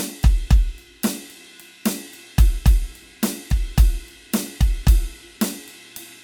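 From the first second to the end, the music has a swirly, watery quality, with a hollow, smeared tone and softened attacks, though content still reaches up to about 20.2 kHz. This is generation loss, likely from repeated MP3 encoding, with the character pointing to a 128 kbit/s chain run around five times. Each decode and re-encode quantised the signal on a shifted frame grid, so noise and spectral gaps compounded beyond what a single pass would leave.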